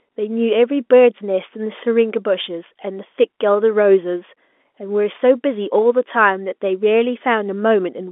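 No technical faults are present: the speech carries the narrow band of a G.711 telephone line, from about 250 Hz to 3.5 kHz, and any coding noise stays faint beneath the signal.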